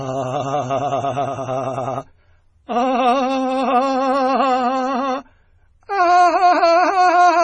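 A music clip with heavy MP3 compression damage throughout. Nothing is heard above about 10.1 kHz, so the treble sounds dull. The sound is watery and swirly. This is likely a very low-bitrate MP3 encode, around 24 kbps, cutting the top and dropping weak detail.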